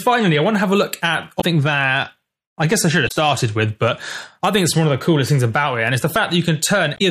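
Damaged data in the compressed stream causes three brief glitches, at 1.37–1.44 s, 3.05–3.12 s and 6.94–7.02 s. Corrupted frames make the decoder lose sync and resync, producing short chirps or blips.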